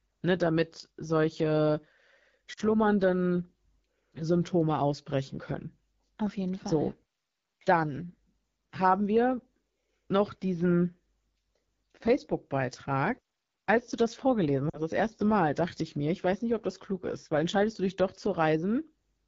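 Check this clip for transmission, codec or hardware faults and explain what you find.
Two kinds of fault are present: low-rate wideband codec damage across the whole clip, and two brief dropouts from lost speech frames.

The AMR wideband (HD Voice) codec damage runs throughout. The rough, raspy texture fits AMR-WB at one of its lowest modes, around 8.85 kbit/s. Too few bits go to the pulse excitation of the vocal tract model. A spectrogram shows smeared harmonics below 6.4 kHz and a shaped noise band from 6.4 to 7 kHz.

Lost AMR speech frames occur from 2.53 to 2.60 s and from 14.69 to 14.81 s, each about 40 ms of missing audio. The decoder repeats the last good pitch and vocal tract settings at falling gain, so the sound drops to near silence within two frames, and the voice comes back weak or rough for a moment. The waveform shows a short amplitude sag, and the spectrogram shows frozen, fading harmonics.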